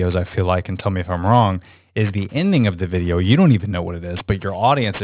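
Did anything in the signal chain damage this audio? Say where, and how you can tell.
Yes. Aliasing runs throughout the speech, introduced at a sample-rate conversion stage. Sibilants sound gritty and metallic, with folded energy at roughly 25 dB below the signal piling up against a 4 kHz edge, which points to an unfiltered drop to 8 kHz.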